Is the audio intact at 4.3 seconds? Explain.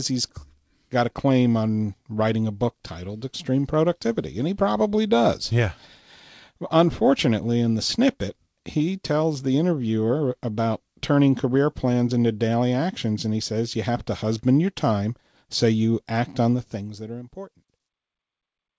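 Yes, the speech at 4.3 seconds is intact, with no dropout, click or other fault at that moment.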